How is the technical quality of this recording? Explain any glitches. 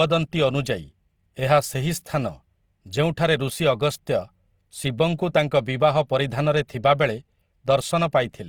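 The recording carries audible coding damage the whole way through, from start to finish. What you're hearing is most likely Opus compression. The top end still reaches to about 20.2 kHz, so the sound isn't muffled. Instead, speech has a rough, grainy texture, with harmonics turning noisy rather than clean. That fits Opus in its full-band CELT mode running short of bits, which points to a rate around 24 kbps. Bands it can't afford get filled with folded or noise-like content instead of being left empty.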